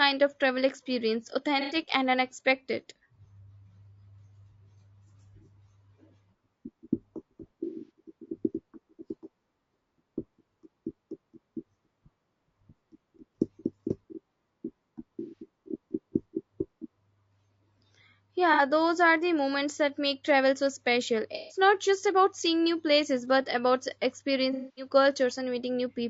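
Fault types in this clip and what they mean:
Low-delay AAC compression: the whole speech track has a rough, grainy texture, with noise filling the gaps between pitch harmonics and a thin, synthetic-sounding top band. This points to a low-delay codec, likely AAC-ELD at around 32 kbps, whose short frames resolve harmonics poorly. A spectrogram shows smeared, weakly separated harmonic lines, speckled noise between them and a patchy upper band. The waveform itself looks unremarkable.
AAC frame loss with concealment: six brief patches where missing audio was rebuilt from the last good spectrum, heard as smeared, noisy or phasey sound. They fall at 1.61 s after "of travel experience" (90 ms), 7.64 s (180 ms scattered over about 240 ms), 15.2 s (120 ms), 18.53 s before "those are the moments" (60 ms), 21.35 s (150 ms) and 24.53 s (240 ms). Spectrograms show blurred, frozen-looking blocks.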